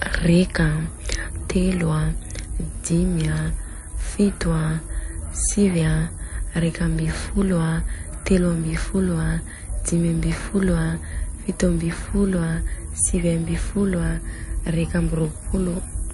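Speech runs through the whole 16-second clip with plainly audible MP3 compression damage, likely from encoding at a bitrate as low as about 48 kbps. Nothing remains above 11.3 kHz, where the encoder cut the treble to save bits. What separates this from a simple low-pass filter is the watery, swirling texture beneath the cutoff: weak frequency lines drop in and out between frames, so s sounds turn metallic and chirpy and attacks smear.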